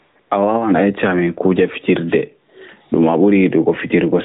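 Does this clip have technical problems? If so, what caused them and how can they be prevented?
Yes. The input gain was likely set far too high, so a fast limiter or compressor clamps down on every loud sound. Throughout the speech, the gain swings by roughly 15 dB, and the level sounds squashed and uneven. Lowering the input gain so the limiter seldom engages prevents this gain pumping.

From 0.0 to 0.16 s, and again from 0.2 to 0.3 s, the phone judged the talker silent and stopped sending speech frames. The receiver filled those gaps with AMR comfort noise, a smooth synthetic hiss that switches in and out in place of the real background. Disabling discontinuous transmission, or making voice activity detection less eager at the start of speech, prevents it.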